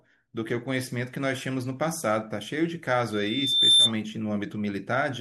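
At 3.12 s a loudspeaker feedback squeal rises out of the speech. The microphone is hearing the loudspeaker it drives, and at 3.6 kHz the loop gain tops one, so that tone feeds on itself, swelling over roughly three quarters of a second to sit about 10 dB above the speech before it stops at 3.92 s. Unlike a steady hum or an interfering whistle, it starts faint and keeps growing at one fixed pitch.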